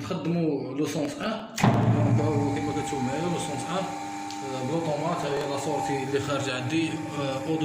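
Processor overload crackle appears twice: from 0.99 to 1.83 s and again from 5.23 to 5.5 s. In each stretch the processor repeatedly misses its deadlines for very short audio buffers, well under a millisecond each, and the missed pieces are simply skipped. The result is a rapid run of hard-edged jumps heard as gritty tearing over the sound. A spectrogram shows dense clusters of thin vertical broadband streaks, and the waveform shows many small abrupt discontinuities.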